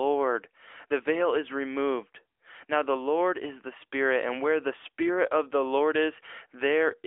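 A speech clip carrying AMR narrowband mobile codec damage throughout. Nothing passes above 3.5 kHz, so a spectrogram shows a hard ceiling there and little energy below 300 Hz. The plainly buzzy, synthetic texture fits AMR-NB coding at roughly 10.2 kbps.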